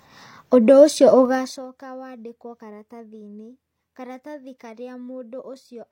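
A rapid ticking, like a zip being drawn, rides on this speech clip from 1.24 to 1.68 s, just after "ũndũ ũcio", while the level drops by roughly 20 dB. This is zipper noise: the gain is lowered in unsmoothed steps of 2 dB, around thirty per second, and each abrupt jump puts a small click into the waveform. Those clicks, following one after another, make the zipping texture that lasts as long as the level is moving.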